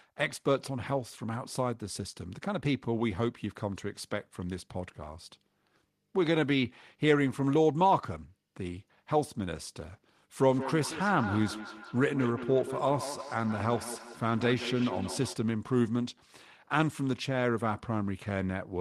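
From 10.5 to 15.4 s, feedback echo between two devices repeats speech every fifth of a second, about 11 dB down, spaced cleanly unlike reverb.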